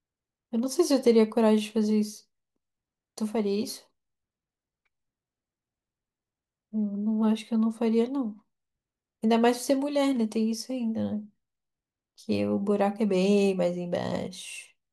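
From about 3.37 s to 4.87 s there's a stretch of sample clock jitter. The converter's clock wobbles by something like a few microseconds, so each sample lands a touch early or late, and the error scales with how steeply the waveform is moving. You hear it as a fine hiss or grit riding on the speech, sitting roughly 35 dB under the signal, strongest on loud, bright moments and gone in the pauses.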